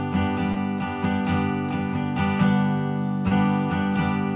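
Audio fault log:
0.52 to 0.58 s and 3.28 to 3.33 s, short concealed packet loss: about 40 and 20 ms never arrived, so the receiver extended the preceding sound, either pitch-repeated or as shaped noise, before crossfading back. This leaves a brief smear on the waveform and repeated or blurred spectrogram texture beneath the call path's 4 kHz ceiling.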